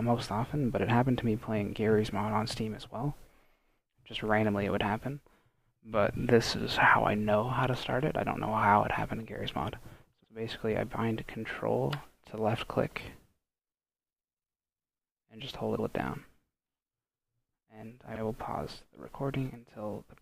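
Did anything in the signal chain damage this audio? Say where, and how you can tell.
Yes. Repeated frames occur at 3.33, 10.23, 15.77 and 18.14 s. Blocks of 26, 78, 105 and 52 ms replay, the first one twice. The multiples of 26 ms point to whole compressed frames being duplicated in storage or transmission before decoding.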